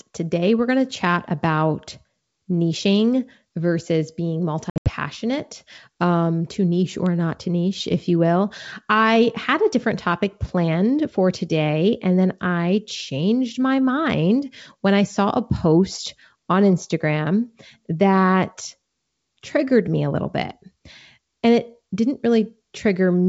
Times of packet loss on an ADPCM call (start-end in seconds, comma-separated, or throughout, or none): 4.70-4.91